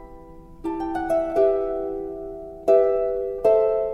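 No technical faults can be heard anywhere in this clip.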